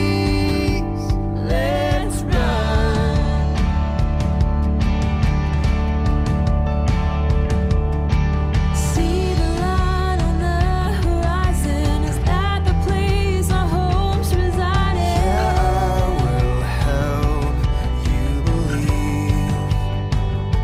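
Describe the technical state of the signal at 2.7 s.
Nothing is wrong with the signal at 2.7 s; the audio there is intact, with no dropout, click, distortion or other fault to be heard.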